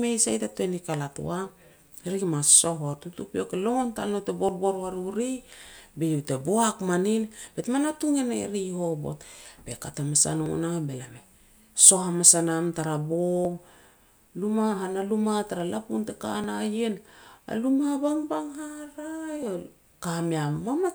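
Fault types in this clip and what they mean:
Audio missing between chunks: brief jumps where roughly ten milliseconds vanish and the speech joins straight up, first right after "tal nou te" at 4.49 s, then 10.46, 13.45, 16.44 and 19.43 s. The three-second rhythm likely means slivers lost at each chunk handover.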